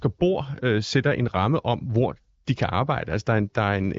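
No technical faults are audible.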